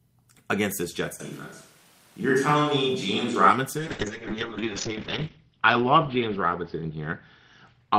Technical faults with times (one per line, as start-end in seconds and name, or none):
1.20-3.50 switch to a distant microphone
3.78-7.99 call bitrate drop